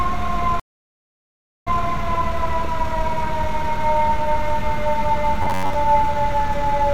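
Stream reconnect at 0.60 to 1.84 s: the connection dropped, leaving about 1.07 s of silence, and the restarted decoder resumes 0.17 s earlier, so a brief stretch repeats.

Robotic sound from repeated short buffers at 5.42 to 5.76 s: a rigid, metallic buzz near 94 Hz, likely from one roughly 11 ms slice being replayed while most of the real audio is skipped.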